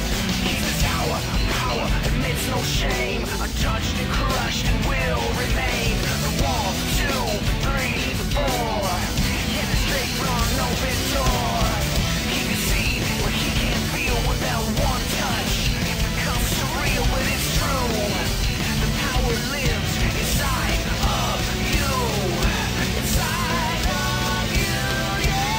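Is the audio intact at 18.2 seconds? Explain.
No. Mains hum runs through 18.2 s and the whole clip: power-line coupling, likely from a ground loop, adds a steady 50 Hz drone roughly 15 dB below the signal.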